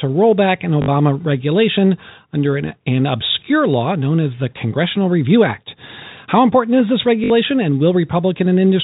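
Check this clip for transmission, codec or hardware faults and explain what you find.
Two short dropouts affect the speech, both packet loss with last packet repeated, heard over telephone-band audio with nothing above 4 kHz.

Packet loss with last packet repeated, at 0.82 to 0.88 s and 7.24 to 7.30 s, each lasting 60 ms. That span points to three lost 20 ms packets. The receiver filled the gap by replaying the final packet that arrived. Those repeats ignore the pitch cycle, so the run buzzes briefly, like a robotic stutter.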